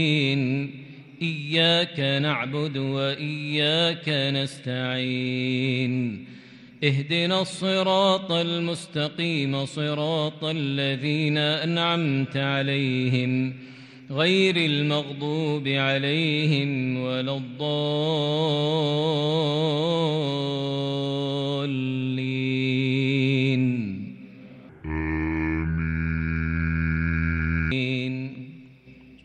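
From 24.7 to 27.7 s the sound suddenly drags, deep and sluggish, pitched down about seven semitones: a section at the wrong speed, running at 0.629 times its proper rate, likely because it was played against the wrong clock, so pitch and tempo fall together.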